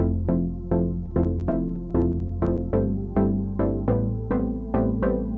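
From 1.06 to 2.60 s the audio shows repeated stalls (stutter): the stream keeps briefly halting as the jitter buffer runs dry, and each hole is bridged by continuing the sound just heard, with fourteen such fills, none longer than about 24 ms, adding up to roughly a tenth of that stretch. Nothing is lost, but the passage drags with a fine, jerky flutter. On a spectrogram the bands smear into short flat repeats, while the waveform shows tiny repeated cycles. A cutoff at 8 kHz fits a G.722 call path.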